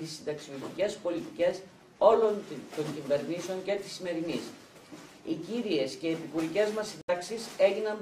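At 7.01 s the sound drops to silence for about 70 ms, then returns at 7.10 s further along, as if it had kept playing. This is likely a Bluetooth dropout, with late packets discarded before reaching the headphones. A buffer stall would instead pick up where it stopped.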